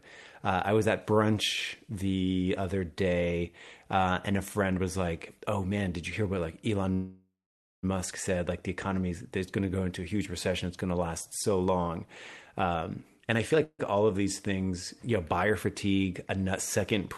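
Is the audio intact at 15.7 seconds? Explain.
Yes, the audio is intact at 15.7 seconds, with no fault at that moment.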